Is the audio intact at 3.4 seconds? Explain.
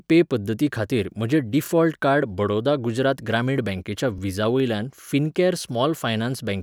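Yes, the audio is intact at 3.4 seconds, with no audible fault at that moment.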